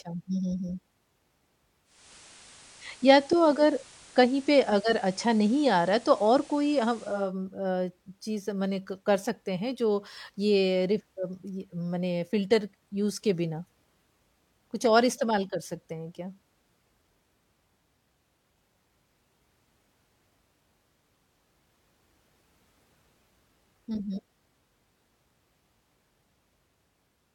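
At 1.84 s the sound shows digital radio blending to analogue. The receiver lost its digital stream and cross-faded to the same station's FM broadcast. The switch takes about 0.31 s. Hiss rises underneath, sitting roughly 25 dB below the signal. The level shifts by about 2 dB. At 7.33 s the receiver blends back to digital, and the hiss disappears.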